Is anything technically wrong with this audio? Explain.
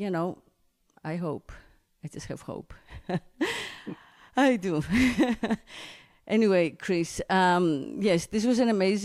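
No, the speech signal shows no technical faults at any point in the recording.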